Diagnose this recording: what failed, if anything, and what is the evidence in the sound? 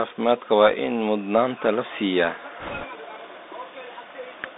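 The codec stage failed: the Bluetooth CVSD headset codec holds the sound to roughly 200 Hz to 3.7 kHz throughout, with scratchy s sounds and a granular hiss, which fits a 64 kbit/s one-bit delta stream whose adaptive step lags loud high content. That grainy hiss separates it from ordinary telephone band-limiting.

On the radio link, bit errors on a Bluetooth voice link strike from 2.60 to 2.85 s, just after "in mudnaanta la siiyaa", where a rushing crackle swells under the sound at an error rate of a few percent. Each flipped delta bit nudges the output only slightly, so there are no loud clicks or gaps as with packet loss.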